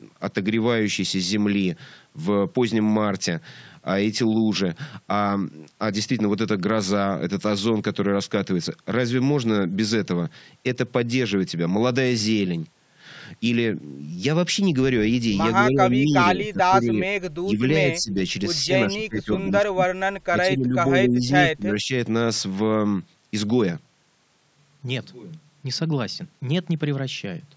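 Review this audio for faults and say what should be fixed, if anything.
Speech suppressed in double talk appears at 15.68–16.14, 16.33–17.23, 17.4–17.66, 17.96–18.17, 18.63–19.9, 20.3–20.76, 21.02–21.3 and 21.47–21.91 s. The speech dips by about 10 to 25 dB in short bursts, most likely because the echo canceller could not separate the near-end speech from the loudspeaker echo of the far-end talk and turned down the near-end speech along with it. On the waveform the envelope has notches cut into it. On the spectrogram, energy thins or vanishes, most visibly in the upper band. To prevent this, tune the echo canceller's double-talk detection so it holds back suppression while both sides are speaking, or reduce loudspeaker coupling into the microphone.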